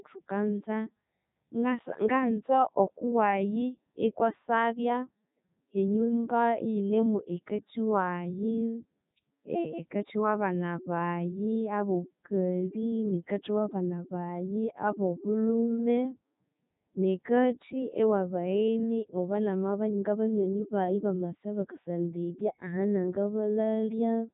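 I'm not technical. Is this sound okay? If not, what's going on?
No. The speech has been squeezed through a Codec 2 vocoder, a very low-rate system made for digital radio. It doesn't send the actual sound. It sends only a rough outline: pitch, loudness and the general shape of the voice. The far end rebuilds speech from simple tones. So the whole clip sounds robotic and buzzy, and the damage is heavy. Nothing is left above about 3.8 kHz, which makes it dull and muffled too.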